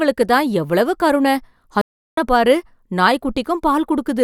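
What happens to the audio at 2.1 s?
At 2.1 s the speech sits inside a stream reconnect running from 1.81 to 2.18 s. The connection dropped, leaving about 360 ms of silence, then a fresh decoder rejoined mid-stream. Unlike a plain dropout, the speech resumes roughly 0.4 s further on, skipping material.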